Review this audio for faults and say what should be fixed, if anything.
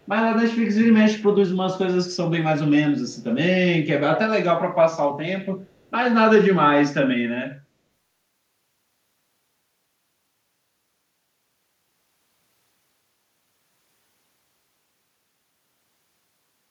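A faint, delayed copy of the speech surfaces briefly at 0.02–0.07 s and again at 5.83–5.91 s, trailing by 260 ms and 241 ms, far below the main level. This is likely an echo leak: the other side's loudspeaker fed its microphone, and its echo canceller let scraps through. A headset on that end, or better echo cancellation there, would prevent it.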